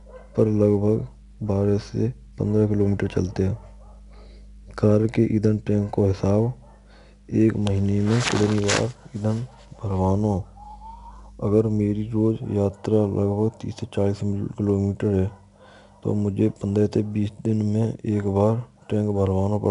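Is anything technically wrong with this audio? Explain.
Yes. Throughout the whole speech clip, a gritty hiss rides on every loud syllable and sharp consonant onsets sound roughened, while the top end is dull with nothing above about 10.6 kHz. This is 4-bit ADPCM compression. Each sample is coded as a small step from a predicted value, so the coding error becomes noise that rises and falls with the speech, and the step size lags on fast attacks. The missing highs point to a reduced sample rate.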